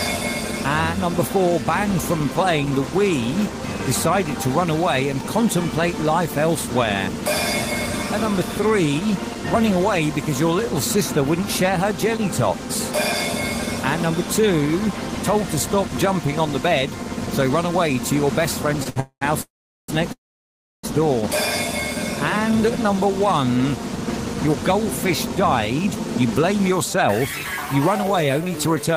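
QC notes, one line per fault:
18.83 to 18.98 s, two short stalls from a late packet: the sound hangs for about 22 ms, then about 62 ms, each time a packet turns up late and the jitter buffer runs dry. The receiver just stretches the last bit of sound until the packet lands and carries on from the same spot, so nothing's really lost. You hear a brief held smear with a faint buzz or dip, and the delay creeps up by those amounts.
19.00 to 20.85 s, three call audio freezes, at 19.00 to 19.23 s, 19.41 to 19.90 s and 20.12 to 20.85 s, getting longer each time: 215 ms, 470 ms, then 711 ms. Likely packets held up in transit emptying the buffer again. The receiver carries the last sound on as a fading buzz, which dies to silence for about 80 ms, 410 ms and 670 ms. Then the audio picks up where it stopped, so it's gaps added rather than chunks cut.
22.33 to 28.96 s, jitter buffer speed-up in three stretches: 22.33 to 23.81 s at 105 percent, 24.26 to 25.45 s at 103 percent, and 25.86 s to the end at 104 percent. 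After all that stalling the buffer's holding too much audio, so the receiver snips out tiny pitch-period-sized slices over and over to claw back the delay, roughly 70, 40 and 150 ms. Pitch stays put but things run a touch fast, with the first stretch feeling hurried.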